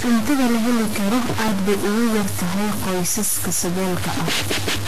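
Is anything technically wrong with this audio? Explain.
Yes, there are three distinct problems in this speech recording.

A stuck bit runs through the whole clip. The sound is a distortion on the speech, and the pauses are filled with noise instead of silence. This is likely one converter or data bit held at a fixed value, offsetting roughly half the samples as the waveform moves.

Vorbis compression damage is also present throughout and is plainly audible. Nothing remains above 14.2 kHz, and the treble sounds hissy and grainy, with blurred consonant attacks. This likely comes from coarse quantisation of the high-frequency residue at a low bitrate, consistent with roughly 35 kbps.

A repeated buffer occurs at 1.48 s, between "la heli karo" and "bay ugu yar tahay", and again at 3.80 s. Each is a tiny click or buzz rather than an audible stutter. The device replayed a 1.45 ms block, which fits a 64-sample buffer, twice extra and then once extra, and a few milliseconds of audio were lost.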